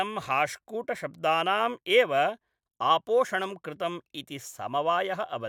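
Nothing stood out as a technical fault anywhere in the speech on listening.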